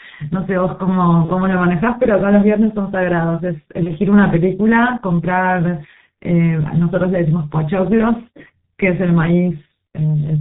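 The whole clip carries heavy G.723.1 codec damage. At about 6.3 kbit/s, nothing above 4 kHz survives. The speech sounds muffled and hoarse, with smeared consonants.

At 1.25 to 1.31 s and 3.83 to 3.92 s, VoIP packet loss is concealed by the speech codec. Each gap fits a single lost 30 ms frame, filled with a brief buzzy tone or coloured noise that fades before the voice recovers.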